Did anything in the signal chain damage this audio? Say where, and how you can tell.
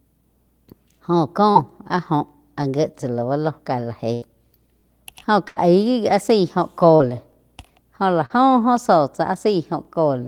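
Yes. Short concealed packet loss on the network path, at 1.51, 6.96 and 8.26 s. About 40 ms went missing each time. The decoder extended the previous sound, leaving brief smears.

Overlapping chunks in the buffering stage cause ticks at 2.29, 4.81, 7.33 and 9.85 s. That is every 2.5 s. Each chunk replays the last 21 ms of the previous one.

A burst of packet loss on the network hits twice: 4.13 to 4.25 s, after "ka la", and 5.48 to 5.59 s. Roughly 80 ms disappears each time. The concealment holds the last sound, fading it, then jumps ahead.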